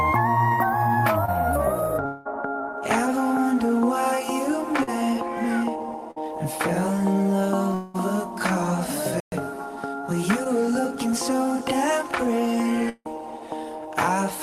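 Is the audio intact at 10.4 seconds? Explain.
No. From 10.44 to 10.47 s there is short concealed packet loss: about 20 ms of audio arrived too late, and the receiver extended the preceding sound, leaving a brief smeared patch.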